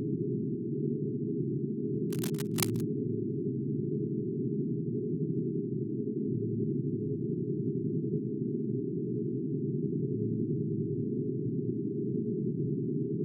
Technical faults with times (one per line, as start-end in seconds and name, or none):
2.10-2.83 cable scratch noise